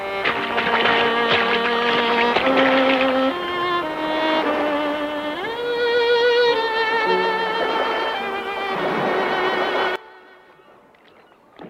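From 9.96 s to the end at 11.70 s the sound drops by about 20 dB to a faint copy, with the centre nearly gone. That's likely one channel inverted: reversed polarity cancels whatever both channels share once they're summed to mono.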